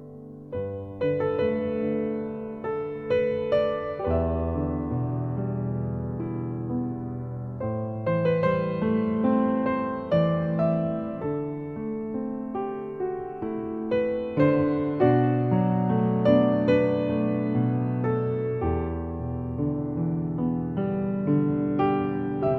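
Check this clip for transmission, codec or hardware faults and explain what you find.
No transmission, codec or hardware faults can be heard, and the signal arrives intact with no breaks, distortion or level disturbances anywhere in the clip.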